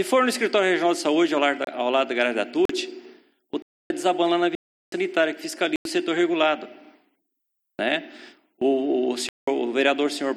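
Blocks of digital silence occur at 1.65 s (26 ms), 2.65 s (40 ms), 3.62 s (279 ms), 4.55 s (372 ms), 5.76 s (93 ms) and 9.29 s (186 ms). Each time the sound cuts out and back with no fade. The shortest gaps are heard as brief holes and the longer ones as longer holes. The later gaps match buffer-sized blocks of 4096 to 16384 samples, which points to an output buffer that wasn't filled in time.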